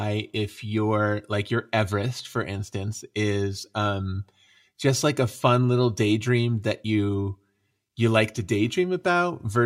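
No technical faults can be heard anywhere in this recording.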